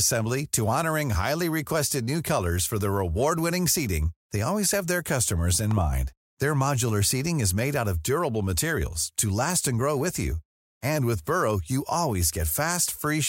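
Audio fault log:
5.71–5.80 s, loud pop: right after "have their customers in", two sharp pops land in quick succession, peaking a few dB above the speech, which carries on underneath. This is likely a voltage step or spike from a plug, switch or static discharge, shaped by the downstream circuitry into brief thumps. On the waveform, two tall narrow spikes rise above the speech envelope; on a spectrogram, two thin vertical stripes run across the full frequency range.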